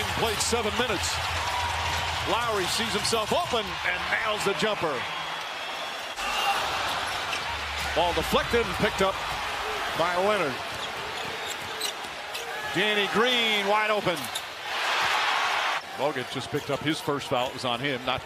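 No technical fault can be heard anywhere in the audio. There is nothing to report that would need a time or a cause.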